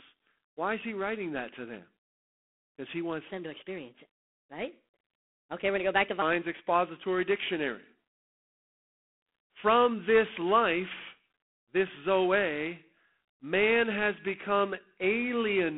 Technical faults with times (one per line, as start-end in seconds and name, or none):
0.00-15.77 G.726 ADPCM
3.31-6.22 section at the wrong speed